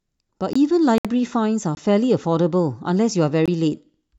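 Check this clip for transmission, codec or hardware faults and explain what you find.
Two faults are present in the speech: three short dropouts to digital silence and one longer pause consistent with a wireless stall.

At 0.53, 1.75 and 3.46 s, a block of digital silence about 21 ms long appears, which fits an unfilled 1024-sample output buffer. Each is a brief hole with hard edges.

From 0.98 to 1.05 s, the audio stops for 66 ms and resumes where it left off. The likely cause is a Bluetooth stall, with the headphone buffer running dry while delayed packets were resent.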